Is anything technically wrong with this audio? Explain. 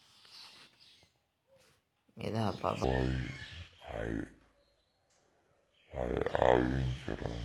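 Yes. From 2.84 s to 7.44 s, the speech abruptly turns deep and sluggish, running at 0.634 times its proper speed and roughly seven semitones low. This section at the wrong speed is likely playback against the wrong clock, which drags pitch and tempo down together.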